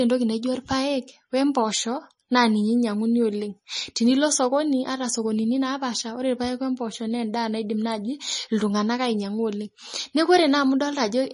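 Right through the speech there's plainly audible MP3 compression, likely from a low bitrate around 34 kbps: treble stops dead near 10.6 kHz, with watery, swirly smearing.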